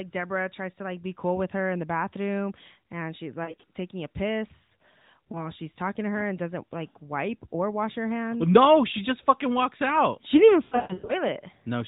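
Speech carried over an AMR narrowband link, band-limited below 4 kHz, with lost AMR speech frames: brief warbles at 3.44–3.64 s after "the bathroom and she's" and 5.32–5.50 s after "taking a piss", and a drawn-out fade at 10.64–11.15 s after "didn't even". In each, the decoder repeats its last good frame settings with falling gain.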